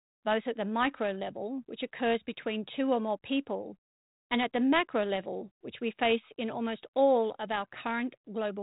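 No technical faults are present; the speech runs over a G.726 ADPCM path at 32 kbit/s with only light coding grain and nothing above about 3.8 kHz.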